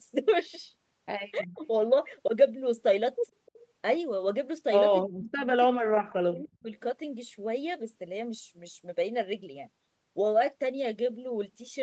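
At 1.4 to 1.61 s the speech level drops, falling by roughly 40 dB for about 200 ms before recovering. This is speech suppressed in double talk, likely caused by the call's echo canceller treating simultaneous speech from both ends as echo and attenuating the near side along with it.

At 3.46 to 3.51 s a brief, faint copy of earlier speech appears roughly 300 ms after the original, some 35 dB below the main level. This is an echo leak, likely from a loudspeaker endpoint whose canceller left a fragment of residual echo. It is heard as a short ghost of the earlier voice.

The same suppression returns twice more. From 5.07 to 5.46 s the speech drops by roughly 40 dB for about 400 ms. From 5.71 to 6.72 s it is held down for about a full second, again likely because both ends were talking at once. The call microphone processing, with its 8 kHz bandwidth limit, is present throughout and is not a fault.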